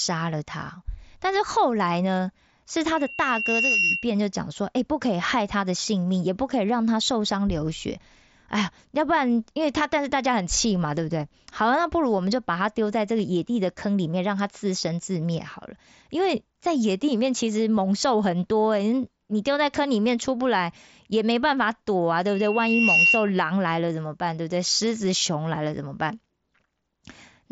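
A microphone picked up its own loudspeaker, and the loop gain rose above one at 2.8 kHz, causing loudspeaker feedback squeal from 2.95 to 4.13 s and again from 22.26 to 23.33 s. Each time, a single tone swells over a little under a second to sit slightly above the speech, heard through a headset band that stops near 7.7 kHz.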